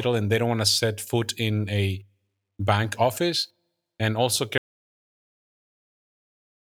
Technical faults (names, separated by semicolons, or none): audio dropout to silence